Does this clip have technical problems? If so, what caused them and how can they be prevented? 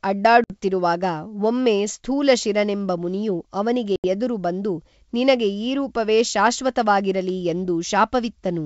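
Yes. Packet loss on an ADPCM call silences 60 ms at 0.44 to 0.56 s, and 80 ms at 3.96 to 4.05 s, between "ಒಮ್ಮೆ ಸ್ಥೂಲಶಿರನೆಂಬ ಮುನಿಯು ಅವನಿಗೆ" and "ಎದುರು ಬಂದು ನಿನಗೆ ಈ". Each gap is a few lost packets filled with silence. The decoder's predictor and step size drift from the sender's, so speech resumes briefly distorted before settling. Prevention: use jitter buffering with packet-loss concealment and decoder-state resynchronisation, or redundancy such as FEC.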